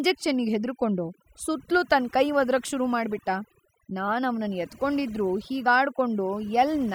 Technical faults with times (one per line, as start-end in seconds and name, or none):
0.00-6.95 overdone noise removal